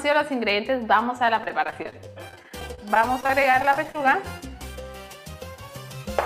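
From 1.24 s to 4.15 s the audio suffers repeated packet loss, giving a robotic sound. Dozens of short holes, none longer than about 28 ms, follow one another closely. Each is patched by stretching the last sound, and about 17% of the span ends up concealed in this way. The result is choppy, with pieces missing. On a spectrogram, repeated smeared, frozen harmonic slices are broken by abrupt edges. The waveform shows recycled cycles and small dropouts.

Overlapping the end of that stretch, from 3.68 s to 4.51 s, comes a jitter buffer slow-down. The receiver was short of reserve, so it repeated single pitch periods to buy time, adding about 55 ms and running the audio at 94% speed with the pitch unchanged. Sounds are drawn out. A waveform shows identical periods stacked in a row, and a spectrogram shows features elongated in time without shifting in frequency.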